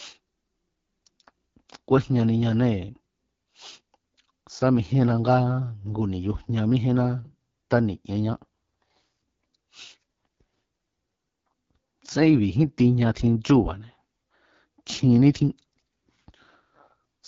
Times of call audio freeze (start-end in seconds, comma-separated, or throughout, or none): none